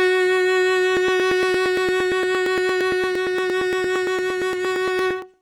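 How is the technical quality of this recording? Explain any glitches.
The music has one real problem: periodic USB or driver dropouts running from about 0.97 s to 5.34 s. Every 0.115 s, something blocks the USB bus or audio driver, and around 10 ms of audio gets skipped outright rather than filled with silence, so the signal jumps forward each time. You hear it as a steady train of ticks, roughly forty of them, ticking along at that even spacing right through the music until near the end.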